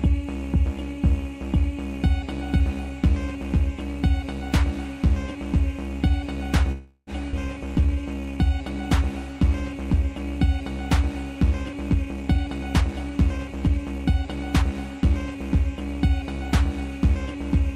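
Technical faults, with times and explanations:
6.71–7.10 s, call audio freeze: the last sound is stretched into a fading buzz for about 356 ms, ending briefly silent, likely from delayed packets. It then resumes with nothing lost, unlike a skip.
7.31 s, skip ahead: about 150 ms of audio is dropped and the two sides are butted together with only a tiny gap, so the sound jumps forward instead of pausing.
7.66–8.51 s, jitter buffer slow-down: repeated pitch periods add 163 ms, so the sound runs at 82% speed with its pitch unchanged, drawn out rather than frozen.
11.90–14.63 s, jitter buffer speed-up: roughly 400 ms of short pieces are cut out, so the sound runs at 114% speed with its pitch unchanged and hurried, without one obvious jump.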